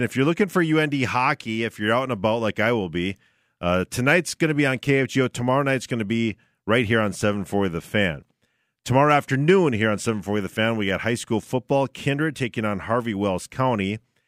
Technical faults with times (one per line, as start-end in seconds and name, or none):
none